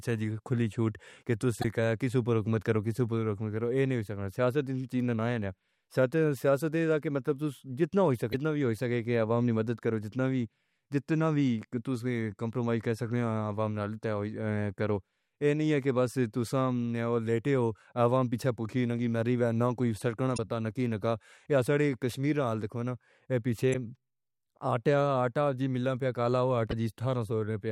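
Damaged data in the compressed stream hits this speech at 1.60–1.65, 8.29–8.34, 20.34–20.39, 23.70–23.75 and 26.70–26.73 s: the decoder misreads the bad frames and resyncs, leaving short glitches.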